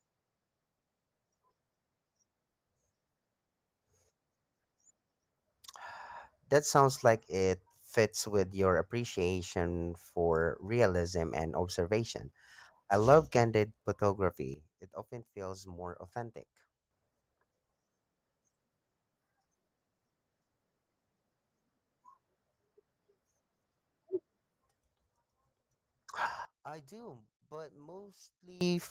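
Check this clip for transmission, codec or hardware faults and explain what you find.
Two sudden gain jumps stand out in this speech clip, heard through light Opus voice compression. From 14.54 to 16.91 s the level drops abruptly by about 12 dB, and from 26.45 to 28.61 s by about 24 dB. Speech and background noise fall together, likely from gain settings applied without a ramp.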